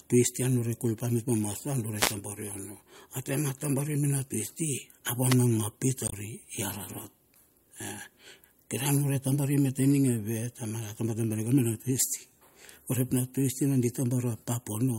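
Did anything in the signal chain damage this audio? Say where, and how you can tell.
Yes. Two brief bursts of static, from 1.96 to 2.15 s and from 5.27 to 5.37 s, are wireless microphone noise hits. The FM radio link faded as reflected signals cancelled at the receiver, and its own noise rose over the speech for those moments.

At 6.05 to 6.13 s a short glitch points to damaged data in the compressed stream. Corrupted bytes made the decoder misread frames, lose sync and jump forward to the next valid frame header.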